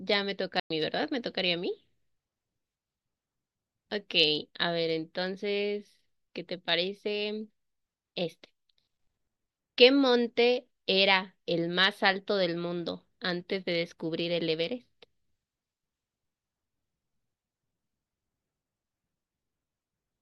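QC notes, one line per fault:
0.60–0.70 s, stream reconnect: the speech cuts to silence for 97 ms, then resumes roughly a tenth of a second further on, easing in softly. The connection dropped, and the player reconnected with a fresh decoder joining the stream mid-flow at a later point.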